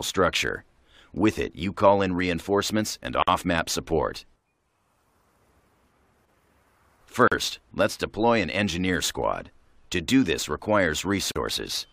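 A gap at a join of encoded pieces appears at 3.22 to 3.28 s, lasting about 52 ms, and again at 7.28 to 7.32 s and 11.32 to 11.36 s, about 40 ms each, recurring every 4 s in otherwise continuous audio. The pieces were evidently encoded separately and butted together untrimmed, so each encoder's start-up delay and final-frame padding survive as silence. The edges are smeared by the codec, and the sound resumes where it stopped.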